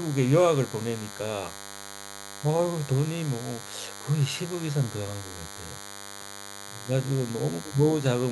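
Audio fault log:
Throughout: DECT cordless phone buzz. A thin, steady buzz sits under the speech the whole way, roughly 15 dB below it. It comes from a DECT handset or base nearby firing a radio burst 100 times a second. The audio circuitry rectifies those bursts, which turns them into a 100 Hz buzz with a stack of harmonics. That's why it sounds raspy rather than like a clean hum.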